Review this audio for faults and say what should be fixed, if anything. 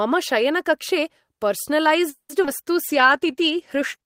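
Packets were likely held up in transit between 2.09 and 2.31 s, and the jitter buffer ran dry: a call audio freeze. The receiver extended the last sound for about 200 ms, fading into roughly 80 ms of silence, then resumed exactly where it stopped, nothing lost but playback now 200 ms later.

At 2.43 s, 40 ms of audio failed to reach the decoder in time, a short concealed packet loss. Only about 10 ms was synthesized from the preceding sound, so the result is a brief smear or wobble as the signal bridges the hole and playback catches up by roughly 30 ms.

Immediately after, at 2.46 s, a stretch of audio was dropped while later audio was already waiting, a skip ahead. Roughly 70 ms of speech is gone, and the two sides are joined with almost no gap, trimming about 50 ms of latency.

From 2.82 s to the end, the bandwidth estimate fell and the encoder dropped from 32 to 13 kbps, a call bitrate drop. 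Held at the lower rate for 1.15 s, the speech turns coarser and more muffled, losing high-frequency detail.

Between 3.02 and 4.02 s, the jitter buffer slow-down rebuilt its reserve by repeating pitch periods and pause fragments, adding 59 ms. Speech plays at 95% speed with unchanged pitch, so sounds drag slightly and may warble faintly.

Prevention calls for a steadier network path with better congestion control, so packets arrive on time and the bandwidth estimate does not collapse, along with a jitter buffer target sized for the observed delay spikes.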